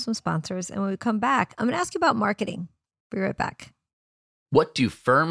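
No technical faults can be heard anywhere in the speech. There is no moment in the recording that needs a timestamp or an explanation.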